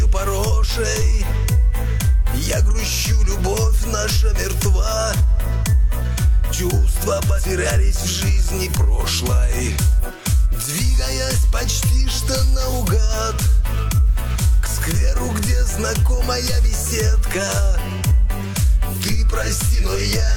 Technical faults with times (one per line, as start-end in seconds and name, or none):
7.34-7.40 damaged data in a compressed stream
9.99-10.04 damaged data in a compressed stream
14.06-17.64 low bit depth with dither
14.31-14.34 damaged data in a compressed stream